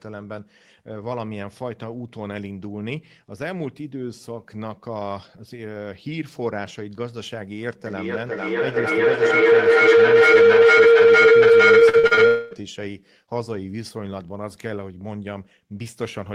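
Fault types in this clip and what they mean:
Feedback howl: Two devices sharing a room keep feeding each other, each pass louder than the last. From 7.86 to 12.77 s a tone around 500 Hz swells to about 17 dB over the speech, pulsing roughly every half second.
Repeated packet loss (robotic sound): Audio kept going missing in short bursts, each gap patched by stretching what came before. Between 11.79 and 12.19 s a handful of holes, none longer than 40 ms, leave about 40% of that stretch filled in, sounding choppy.
Long network dropout: From 12.27 to 12.53 s, about a quarter second, the sound turns into a smeared continuation of what came before, with no true silence before it resumes. The likely cause is a gap where no audio arrived at all.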